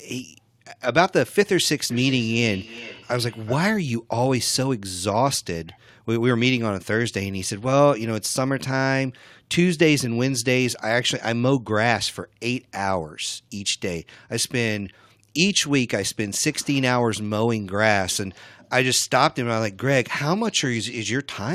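Feedback echo between two devices appears from 1.9 s to 3.77 s. Two devices on the same call in one room are feeding each other: one plays back what the other's microphone sent, that microphone captures it again, and neither echo canceller removes sound coming from the other device. The speech returns at a fixed interval of roughly 0.4 s, thin and ringing, with the repeats peaking at about 17 dB below the direct speech.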